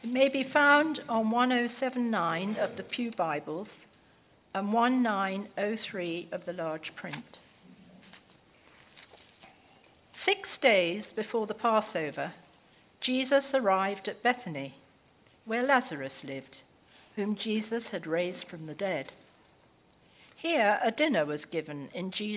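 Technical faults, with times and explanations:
No technical faults are audible.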